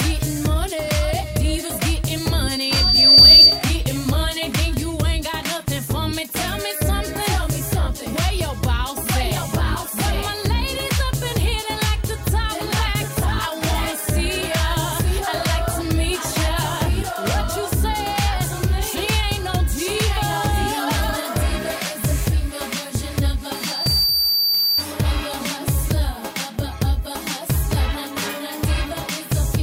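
Loudspeaker feedback squeal appears from 2.32 to 3.66 s and again from 23.54 to 24.86 s. Each time a 4.6 kHz tone swells as a microphone-speaker loop runs above unity gain. On a spectrogram it is a bright horizontal line. The first builds over about a second to roughly 15 dB above the sound, and the second builds over about half a second to roughly 5 dB above it.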